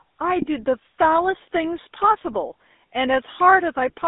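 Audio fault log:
throughout – GSM full-rate codec. Speech carries a plainly audible buzzy, gravelly roughness, and the band is confined to roughly 250 Hz to 3.7 kHz. This fits the 13 kbps full-rate coder. It models the vocal tract as a filter and excites it with a regularly spaced pulse train built from only every third excitation sample. The coarse excitation produces the grainy buzz, and the narrow band removes low body and upper detail.
0.42–0.45 s and 2.72–2.74 s – lost GSM frames. At each point a short, rough, metallic ring briefly replaces the speech, lasting about 20 ms, which is consistent with a single dropped frame each time. The decoder had no valid data, so it reused the parameters from the last good frame. A held, static filter and excitation cannot follow the changing speech, which gives the brief tonal, ringing quality.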